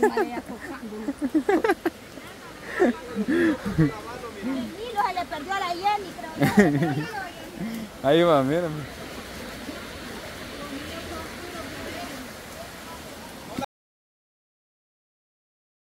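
At 13.65 s the sound stops abruptly, mid-flow, and never returns. This is an audio dropout to silence. The gap runs about 2.2 s, to the very end of the clip. It is pure silence, with no room tone or noise floor underneath. The input was likely lost, through a disconnection, a failed link or a mute, while the recorder kept writing silence. Whatever followed that moment is gone.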